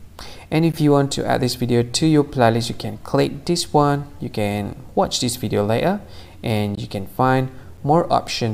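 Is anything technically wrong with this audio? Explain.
Yes. Gaps between stream segments cut in at 0.72, 2.73, 6.75 to 6.77 and 7.77 s. Timestamps of adjacent one-second segments don't meet, so silence fills the hole. Each gap is a hard-edged dropout of about 4 to 20 ms.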